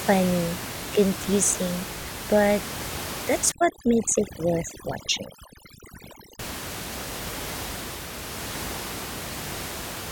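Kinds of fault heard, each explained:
Overdone noise removal: from 3.52 to 6.39 s, noise reduction set far too strong switches off single frequency bands whenever they sit near its noise estimate. The room noise, about 10 dB below the speech elsewhere, drops to near silence sprinkled with twinkling specks, and quieter speech detail goes too. A spectrogram shows a blank floor dotted with isolated bright points and ragged harmonics, and the waveform's pauses fall almost flat.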